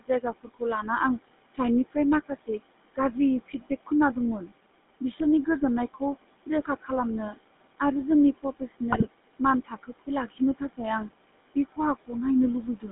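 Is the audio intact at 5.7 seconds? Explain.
No. At 5.7 seconds, as throughout, noise suppressor artifacts are present. The background room noise is pushed down by about 20 dB between words and rises under the speech.

The GSM full-rate codec is also active for the whole clip. Its pulse-driven vocal-tract model gives the voice a buzzy, gravelly roughness. The band runs only from 200 Hz to 3.6 kHz, and the stream runs at 13 kbps.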